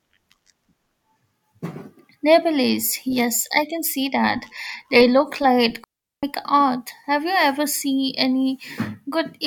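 Right after "look like", at about 5.84 s, the speech just drops into a clean hole until about 6.23 s. That's a digital wireless dropout: the radio link lost too much data, so the receiver muted itself for roughly 390 ms, fading out and back in almost instantly. You get near silence with no hiss, crackle or burst of noise on either side, so it sounds like a tidy gap cut out of the speech.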